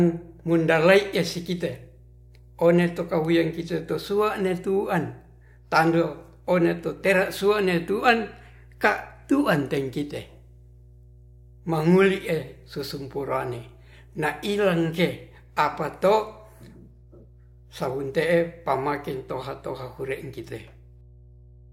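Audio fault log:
Throughout, mains hum: a steady 60 Hz tone with a few low harmonics runs under the speech at roughly 25 dB below it. Power-line current is reaching the signal path, most plausibly through a ground loop or a nearby transformer.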